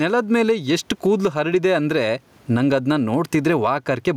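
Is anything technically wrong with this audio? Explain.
Yes. Throughout the speech there is gain pumping: the gain swings by around 15 dB, and the room background sits about 44 dB below the speech. The likely cause is excessive mic gain with a fast limiter clamping down. Unlike a noise gate, pumping raises the gaps rather than silencing them.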